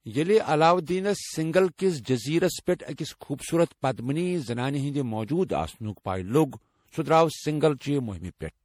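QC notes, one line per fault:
Throughout, generation loss: the speech sounds swirly, smeared and hollow with blurred attacks, likely from around seven passes through MP3 at something like 64 kbit/s.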